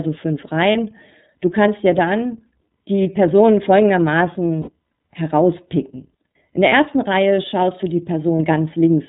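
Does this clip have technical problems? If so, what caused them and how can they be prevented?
Yes. The clip has been through the iLBC codec. The sound is narrowband, with nothing above 4 kHz, and has a slightly rough, synthetic texture. That fits iLBC's 13.33 kbps mode with 30 ms frames. A plain low-pass filter would dull the top end but would not add that coded graininess. Encoding with a wideband codec would prevent it.

Lost iLBC frames occur at 0.72–0.76 s, 3.03–3.06 s, 4.62–4.70 s, 6.69–6.72 s and 8.37–8.40 s. Each gap lasts 30 ms, except the one near 4.6 s, which lasts 60 ms and fits two lost frames. The decoder fills each gap by repeating the last pitch cycle with added noise, so it sounds like a brief buzzy, held vowel rather than silence or a click. Clean speech returns immediately afterwards because iLBC frames decode independently. A more reliable network path, a larger jitter buffer or forward error correction would prevent these gaps.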